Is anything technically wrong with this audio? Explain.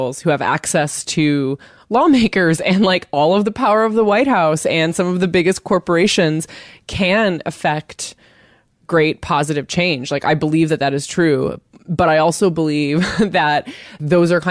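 No, nothing in this speech recording stood out as technically wrong on listening.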